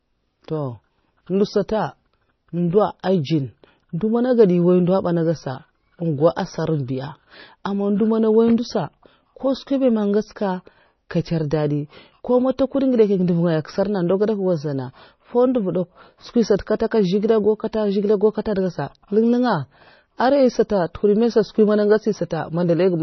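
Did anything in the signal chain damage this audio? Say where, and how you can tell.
Yes, at the codec stage, throughout the speech. Nothing survives above 6 kHz, and the remaining sound is heavily watery and swirly, with smeared attacks. That points to MP3 compression at a low bitrate, likely around 24 kbps. A plain low-pass filter wouldn't swirl. Here, weak frequency lines switch on and off between frames.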